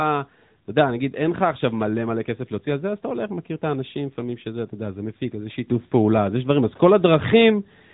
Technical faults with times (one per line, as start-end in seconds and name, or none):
0.00-7.93 AMR narrowband mobile codec
5.68-7.93 sudden gain jump